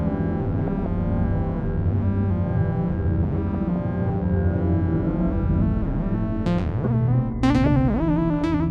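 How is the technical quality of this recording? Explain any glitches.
The music carries DAB burbling in three bursts: 0.59 to 0.87 s, 3.39 to 3.76 s, and a brief blip at 8.41 s. Weak reception lets bit errors, at a rate of a fraction of a percent, slip past error correction into the MP2 data. Corrupted scale factors throw single sub-bands up or down for up to a frame, and corrupted samples add short blips of noise in single sub-bands. Unlike a packet-loss dropout, the sound never goes silent, and only parts of the spectrum jump.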